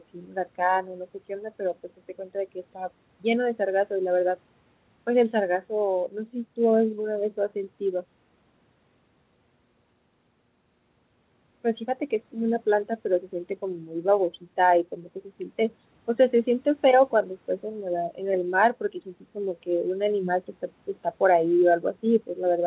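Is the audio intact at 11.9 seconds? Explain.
Yes, at 11.9 seconds the speech is intact, with no dropout, glitch or other fault at that point.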